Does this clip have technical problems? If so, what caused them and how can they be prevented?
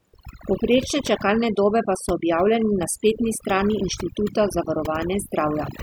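Yes: overdone noise removal throughout, turning near-noise frequency bands off, leaving the background broken into twinkling specks; a spectrogram shows scattered isolated dots in near-empty gaps. Prevent it with gentler reduction settings.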